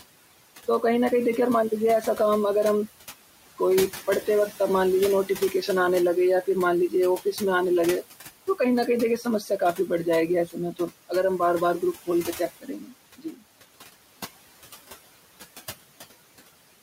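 From the start the background noise pumps: it sinks in the pauses and swells back under the speech. These are noise suppressor artifacts. The suppressor pulls the bands it judges to be steady noise down by about 17 dB, frame by frame, against room noise sitting roughly 15 dB below the speech.

The same processing then starts eating into the speech itself. From 5.27 to 5.68 s a soft stretch turns faint, dropping by up to about 8 dB over around a tenth of a second. From 6.89 to 7.41 s it happens again, deeper at about 11 dB and lasting somewhat longer. The worst cases are 9.18 to 11.4 s and 11.8 to 13.43 s. In each, about half a second of quiet consonants and endings is swallowed, dipping by up to about 16 dB. This is speech cut by the noise suppressor: low-level parts of the speech fall below its noise estimate and get attenuated along with the background.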